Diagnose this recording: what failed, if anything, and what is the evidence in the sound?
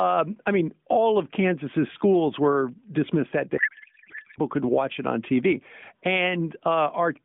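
Codec stage: a codec payload misread from 3.58 to 4.39 s, after "schools were dismissed that", turns speech into garbled warble, consistent with octet-aligned AMR being unpacked as bandwidth-efficient, until "could watch it on".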